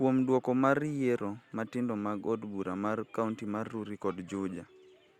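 No technical faults can be heard anywhere in the recording, and the speech signal stays steady and intact throughout.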